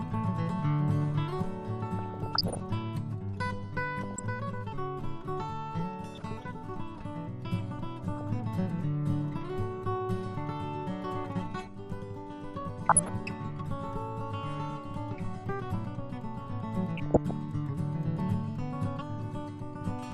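Throughout, the sound is dull and plainly granular, with upper frequencies thinning and returning from moment to moment. This is MP2 compression, likely at around 80 kbps, where too few bits force upper sub-bands off and leave the remaining ones coarsely quantised.

DAB burbling breaks in at 1.99–2.60 s, 3.99–4.23 s, 6.14–6.43 s, 8.17–8.27 s, 12.89–13.09 s and 16.97–17.31 s as short blips of noise in single sub-bands. Bit errors of a few tenths of a percent pass the error correction, corrupting samples into blips.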